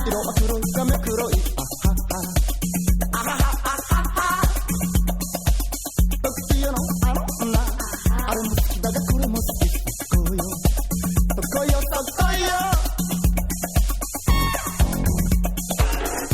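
Right at 0.93 s the audio lurches forward. That's compressed frames skipped: a few 20 ms frames never got played, either missing from the file or rejected by the decoder, so something like 70 ms of material just vanishes. It happens again from 15.71 to 15.76 s, a shorter jump of around 40 ms. Each comes through as a sudden jump where the sound hops ahead.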